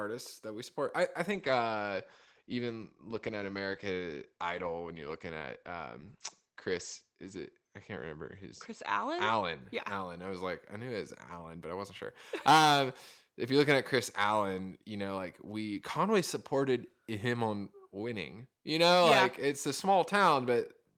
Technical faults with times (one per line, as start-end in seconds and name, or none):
1.32-10.63 call bitrate drop